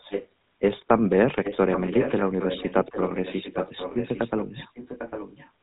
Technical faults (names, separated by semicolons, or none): GSM full-rate codec; echo leak; GSM bit errors